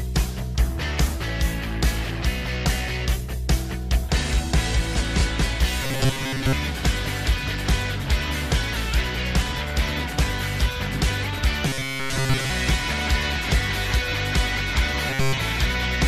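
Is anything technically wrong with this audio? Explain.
Yes. At 5.83–6.54 s, 11.67–12.50 s and 15.09–15.41 s the sound becomes a rigid, metallic buzz pitched at 134 Hz: robotic sound from repeated short buffers. New audio likely arrived too late, so most of each stretch is filled by looping roughly 7.5 ms of old material, and that repeat length sets the fixed pitch. Unlike a plain dropout, the sound never goes silent; it keeps roughly following its original contour.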